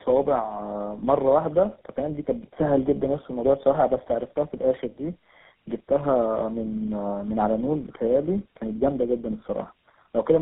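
Throughout, tandem speech coding from repeated decode-and-recode passes, likely ending in GSM full rate, leaves the speech rough, muffled and warbly; the spectrogram shows nothing above 3.8 kHz.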